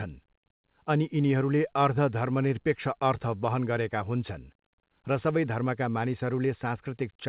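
No faults are audible anywhere in this recording.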